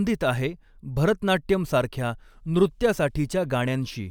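No technical faults can be heard anywhere in the speech.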